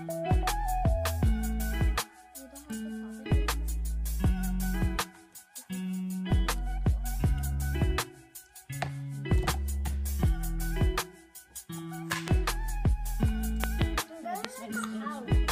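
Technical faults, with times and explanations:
12.28–12.30 s, 13.64–13.84 s and 14.45–14.47 s, loud pop: sharp pops jump out well above the sound, roughly 15 to 20 dB over it, with a quick double pop in the middle one, while the audio keeps going underneath. Likely a voltage spike from a switch, plug or static hitting the signal chain.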